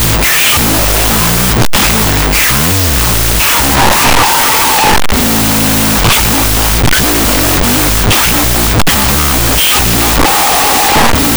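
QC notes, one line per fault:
throughout, wrong sample width: 16-bit speech samples read back as unsigned 8-bit bytes split each sample into two, so the speech runs at half speed, an octave low, buried under loud hiss from the low-order bytes, with only the high-order bytes carrying a distorted trace of the signal.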